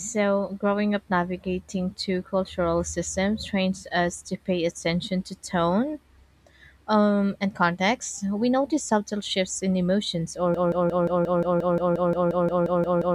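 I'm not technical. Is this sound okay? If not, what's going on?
No. At 10.54 s, right after "shifts in emotions or", the speech turns into a broken-record loop: a tiny piece about 0.18 s long plays 15 times back to back until the end. The playback or stream likely stalled and kept resending the last scrap it held. Unlike an echo, each repeat is identical and doesn't fade, and the speech that should follow is lost.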